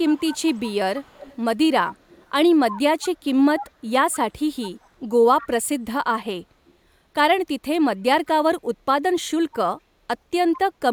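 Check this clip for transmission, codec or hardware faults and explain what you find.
There's one fault here, an echo leak, showing up five times: 0.04–1.36 s, 1.87–2.3 s, 2.71–4.89 s, 5.41 s and 6.7 s. A faint copy of the speech trails it by about 198 ms, strongest around 2.7–4.9 s. It's likely a far-end loudspeaker whose echo canceller let some pickup slip back down the line.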